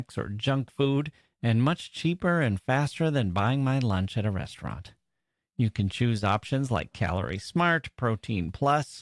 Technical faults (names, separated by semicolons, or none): none